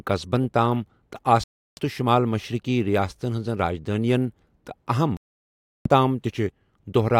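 Right after "قصبن تام تہٕ" the speech cuts to silence from 1.44 to 1.82 s, then again from 5.17 to 5.90 s. Both gaps have abrupt edges or a fade of a few milliseconds and pick up later in the speech, which sounds like a likely Bluetooth dropout with packets missing the headphones.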